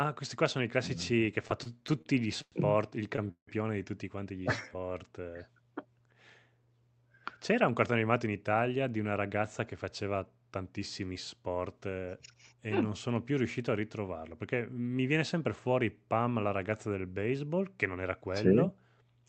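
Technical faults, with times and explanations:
1.47–2.54 s, repeated stalls (stutter): the speech drags and stutters through nine short gaps, about 0.22 s in all, the longest 0.10 s. Late packets emptied the buffer, so the last sound was repeatedly continued.
3.16 s, short stall from a late packet: one sound is held about 21 ms too long. A late packet left the buffer empty, so the receiver stretched the sound.
3.31–3.49 s, call audio freeze: the sound continues as a fading buzz, then 100 ms of silence, 164 ms filled in all. Packets held up on the way are the likely cause.
4.44–4.99 s, jitter buffer slow-down: speech runs at about 85% speed with unchanged pitch, drawn out by 92 ms. The receiver repeated pitch periods to rebuild its reserve.
6.80–8.77 s and 17.93–18.23 s, jitter buffer speed-up: speech runs at about 110% speed, same pitch, sounding hurried. The receiver cut short pieces, roughly 0.2 s and a few hundredths of a second, to reduce excess delay.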